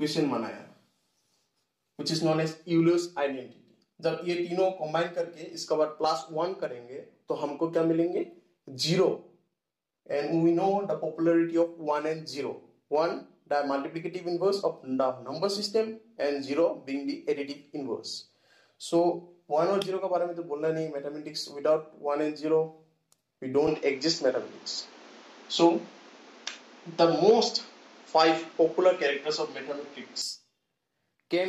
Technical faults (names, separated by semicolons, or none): input switched to a poorer device